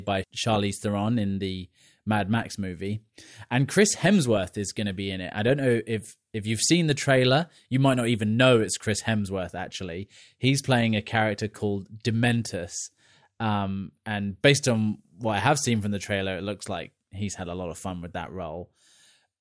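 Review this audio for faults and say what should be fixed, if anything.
No faults are audible; nothing here needs fixing.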